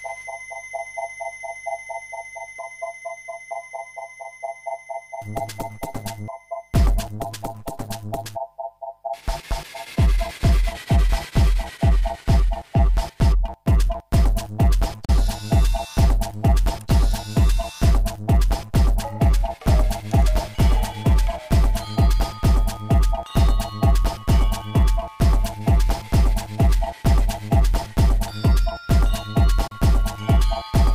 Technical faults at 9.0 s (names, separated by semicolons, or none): none